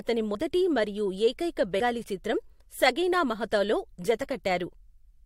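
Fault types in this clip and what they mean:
Compressed frames skipped: at 0.34 s, just before "మరియు ఏకైక", and at 1.79 s, before "చిత్రం సగీనా మహతోలో", whole frames of about 21.3 ms go unplayed. The speech jumps ahead by about 40 ms, then about 100 ms.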